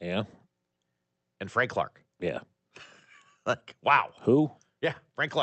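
No technical faults can be heard in the speech. It comes through a call path whose codec limits the high frequencies to about 8 kHz, which fits Opus at a moderate bitrate.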